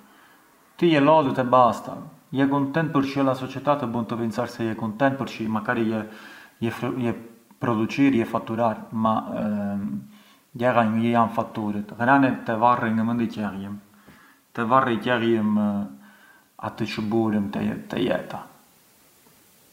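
No audible technical faults present.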